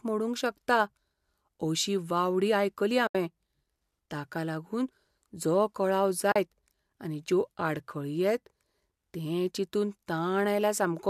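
At 3.07 to 3.15 s and again at 6.32 to 6.36 s, the speech drops into brief soft-edged silences of 80 ms and 40 ms. This is AAC frame loss with muting: the decoder zeroed the missing frames, and the overlapping windows fade the sound out and back in. The gap lengths fit whole 10 ms frames of what is likely low-delay AAC coding.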